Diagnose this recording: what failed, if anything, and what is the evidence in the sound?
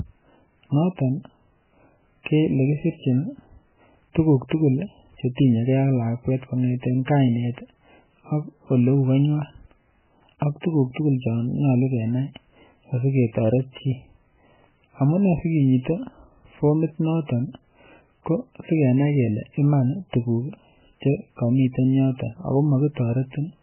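Codec stage: nothing above 3.1 kHz the whole way through, plus heavy watery, swirly smearing. That's likely MP3 compression starved of bits, pointing to something near 8 kbps.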